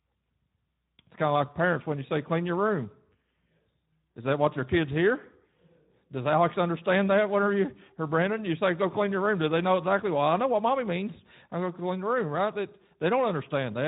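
From start to finish the speech carries Speex codec damage: a hoarse, noisy buzz in the voicing where the excitation is starved of bits, which fits roughly 11 kbps. Nothing sounds above 3.8 kHz. Unlike a simple low-pass, the remaining band itself sounds rough.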